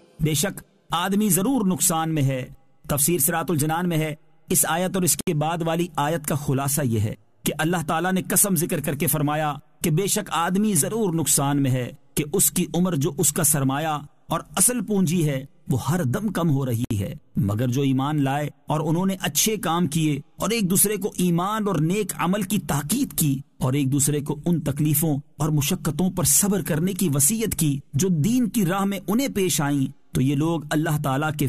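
Twice the sound drops out abruptly and resumes where it left off: from 5.21 to 5.27 s (about 67 ms) and from 16.85 to 16.91 s (about 61 ms), with edges smeared. Each is a gap at a join of encoded pieces, where untrimmed encoder start delay and last-frame padding were left in between separately encoded segments.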